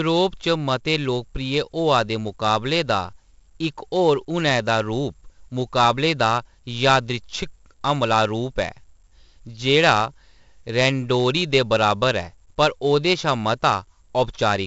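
From start to finish the speech carries 4-bit ADPCM compression, heavily. Each sample is coded as a coarse step from a prediction, so a gritty hiss rides on every loud syllable and falls away in pauses, with crunchy distortion on sharp onsets where the step size lags. Unlike a steady noise floor, this grit tracks the signal's level, and unlike perceptual codecs it has no swirling or warbling. Nothing reaches above 7.8 kHz, which fits a 64 kbps stream at a 16 kHz sample rate.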